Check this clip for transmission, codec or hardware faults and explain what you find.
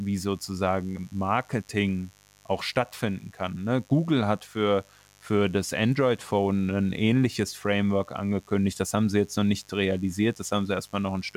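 The clip has one fault, mains buzz, running from start to finish. A steady, raspy buzz sits well beneath the speech, roughly 35 dB down. Sharp switching spikes at twice the 50 Hz mains rate have leaked into the signal path, and their harmonics reach into the kilohertz range. That gives the buzz its grating edge rather than a smooth low hum.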